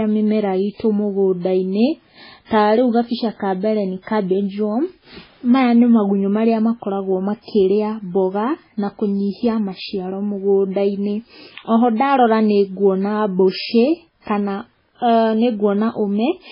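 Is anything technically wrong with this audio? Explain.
Yes. Throughout the speech the sound is watery and swirling, with metallic chirps on s sounds and nothing above 5.3 kHz. This is likely heavy MP3 compression: starved of bits, the encoder cuts the treble and drops weak frequency lines frame by frame, which fits a very low bitrate near 16 kbps.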